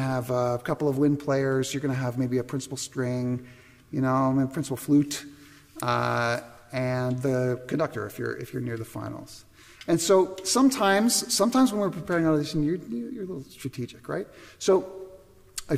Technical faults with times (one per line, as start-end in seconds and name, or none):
none